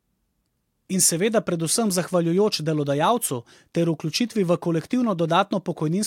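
No technical faults turn up anywhere in this speech recording, so there's nothing to flag at any point along the way.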